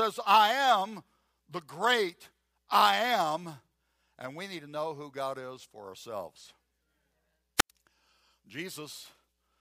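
At 7.57 s a short burst of hiss swells up, and the speech then drops into a hole of near silence lasting about 94 ms before returning by 7.71 s. This is a wireless microphone squelch dropout: the radio link from an analogue FM microphone faded, the receiver's noise rose as the carrier weakened, and its squelch circuit muted the output until the signal recovered and the speech came back.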